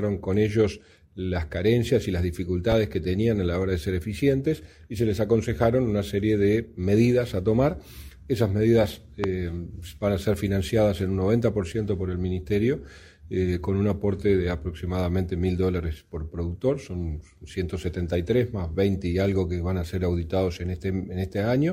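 Two loud pops cut into the audio, at 2.72 to 2.74 s and 9.24 to 9.26 s. The second peaks roughly 20 dB above the signal, the first about 10 dB. Each is a sharp, brief thump, likely a voltage pulse from a switch, plug or static.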